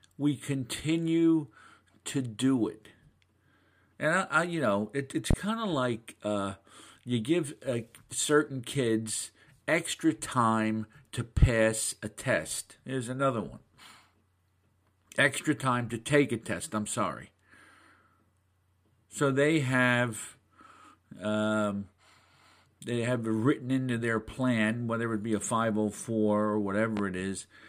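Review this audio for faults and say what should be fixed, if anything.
Loud pops at 5.31–5.35 s, between "you know it it's" and "of like uh you", and at 26.97–27.01 s, roughly 20 dB and 10 dB above the speech. Each is likely a voltage spike from a plug, switch or static, and the speech continues underneath, which distinguishes it from a dropout. To prevent this, keep cables seated, avoid switching equipment while recording, and ground or discharge static first.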